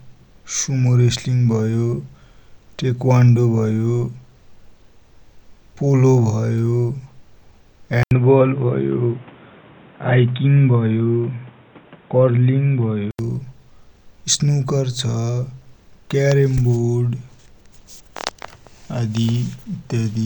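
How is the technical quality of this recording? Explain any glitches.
The speech has one clear glitch. From 8.03 to 13.19 s it turns boxy, with nothing above 3.8 kHz, an 80 ms gap at the switch and a different background noise. That points to the input likely switched to a poorer device, unlike a plain filter or codec change, which wouldn't bring new noise or a gap.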